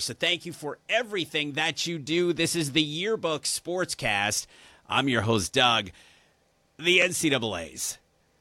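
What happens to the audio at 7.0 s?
A block of digital silence hits at 7.02 s: for about 1 ms the speech drops straight to silence and then resumes. The samples were never filled in, most plausibly because the output buffer wasn't written in time, so the waveform jumps to zero and back with no fade. At this length there's no audible hole; it is heard as a tick or dip over the speech.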